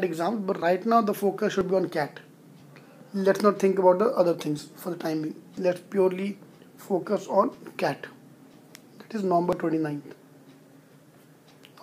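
From 0.62 s to 11.51 s, a regular tick or pop recurs just under once a second, about ten times in all, spaced 0.99 s apart. These are periodic USB or driver dropouts: at a fixed interval something stalls the USB bus or the audio driver, and a short piece of audio, around 10 ms each time, is skipped outright rather than padded with silence. The abrupt join where the audio resumes is what produces each click.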